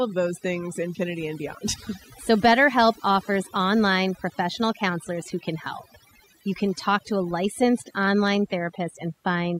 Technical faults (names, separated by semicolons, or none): overdone noise removal